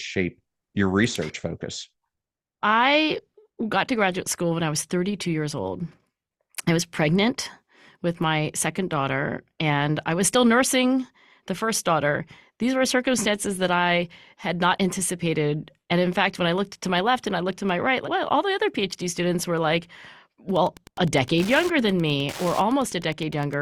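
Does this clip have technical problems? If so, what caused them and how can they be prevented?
Yes. Wi-Fi interference runs from 20.51 s to 23.61 s, a steady ticking at about ten times a second, sitting roughly 20 dB below the speech. A Wi-Fi radio near the recording chain transmits a beacon every 102.4 ms, and some part of the audio circuit rectifies those radio bursts into audible clicks, producing the regular tick pattern. Keeping phones, routers and other wireless devices well away from microphones, cables and interfaces would prevent it.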